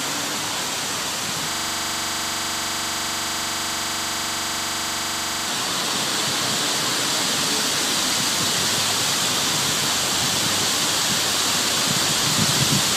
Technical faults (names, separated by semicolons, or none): system hang loop